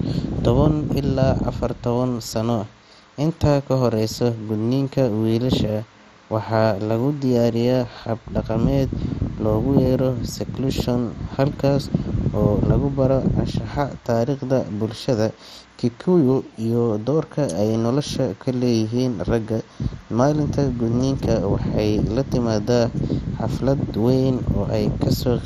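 Throughout, dull, gurgling speech points likely to MP2 compression starved near 56 kbps. Unlike plain low-pass, sub-bands flicker on and off, nothing above 13.8 kHz.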